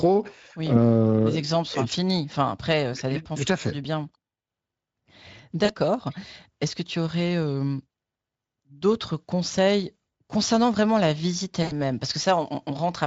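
VoIP packet loss concealed by the speech codec occurs at 5.65 to 5.74 s and again at 11.63 to 11.73 s, about 40 ms and 80 ms of missing audio. The decoder fills each gap by repeating its last pitch and spectral shape at falling gain, so the speech briefly smears into a buzzy, fading tone. It stays weak or distorted just after each gap, against a lightly coded Speex background.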